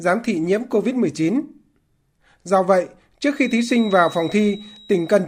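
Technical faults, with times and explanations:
3.29 to 5.28 s, feedback whistle: A thin, steady tone at 3.8 kHz appears behind the speech and lasts to the end of the clip. It sits well below the speech level and swells and fades slowly in level. The likely cause is a loudspeaker-to-microphone loop held just at the edge of feedback. That loop reinforces a single frequency enough to keep it ringing, but not enough to make it grow into a runaway howl.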